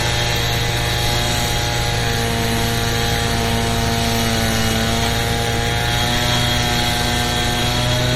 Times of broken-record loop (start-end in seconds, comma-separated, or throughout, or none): none